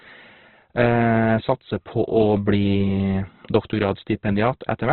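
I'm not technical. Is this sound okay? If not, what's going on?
No. The recording was likely squeezed hard by Opus compression set to a very low quality, which throws away detail to save space. Throughout, the speech sounds muffled and grainy, with nothing above about 4.2 kHz, like a poor phone line.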